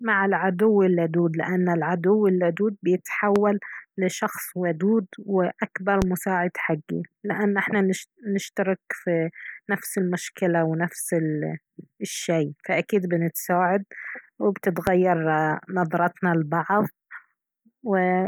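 Speech is interrupted by three loud pops, each a single sharp click lasting about 30 ms, at 3.36–3.39 s, 6.02–6.05 s and 14.87–14.90 s. Each stands out around 15 dB above the speech, which continues unbroken underneath. The likely cause is a sudden electrical transient, such as a plug, a switch, static or a driver glitch, briefly adding a voltage spike that the following circuitry shapes into a short burst.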